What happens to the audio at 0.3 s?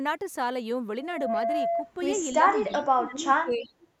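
Nothing goes wrong at 0.3 s: the speech there plays through intact, with no dropout, click, distortion or other fault.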